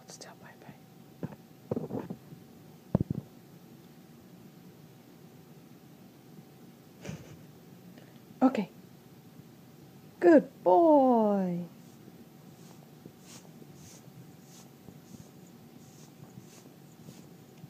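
There are no technical faults to describe anywhere in this audio.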